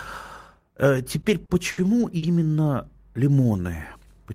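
Around 1.21 to 1.25 s the speech catches on a short stall from a late packet. A packet didn't show up on time, the jitter buffer ran dry, and the receiver held the last bit of sound for about 20 ms before carrying on where it left off. The same thing happens three more times, at 1.45 to 1.51 s (40 ms held), 1.71 to 1.79 s (60 ms) and 2.17 to 2.24 s (50 ms). Nothing gets dropped, but each stall leaves a sound hanging too long with a faint buzz or dip, and pushes everything after it later by the amount held.

Then at 4.01 to 4.13 s there are chunks out of order. A 60 ms chunk turned up one slot late and plays after the chunk that should have followed it. No audio is lost, but the two chunks come through swapped, with hard joins. It's a brief jumbled, garbled blip right near the end.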